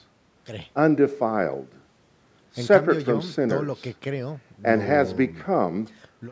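Speech with no technical faults to be heard. It has passed through normal call microphone processing, which removes the lowest bass and leaves nothing above about 8 kHz.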